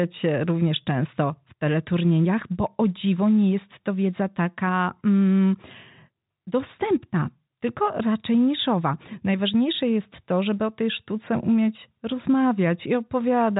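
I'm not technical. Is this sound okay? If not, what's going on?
Yes, this sound is okay; it just has the narrower feel of an ordinary phone line.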